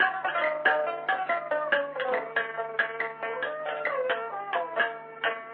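No technical faults can be heard anywhere in the signal, which holds steady throughout without any audible break, distortion or disturbance.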